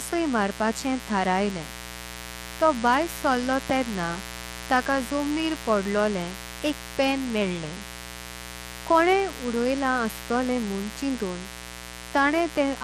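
A speech recording with mains buzz throughout: a raspy 60 Hz hum rich in harmonics, sitting roughly 15 dB below the voice, from switching spikes picked up by unshielded wiring or a dimmer.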